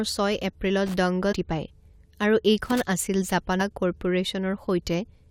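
Speech carrying two kinds of fault. Loose connector crackle appears at 0.86–0.94 s and 2.66–2.80 s as irregular scratchy bursts from a contact making and breaking, unlike the brief tonal blips of codec errors. Damaged data in a compressed stream causes short glitches at 1.31–1.33 s and 3.59–3.61 s, where the decoder loses sync and searches for the next frame header rather than scratching.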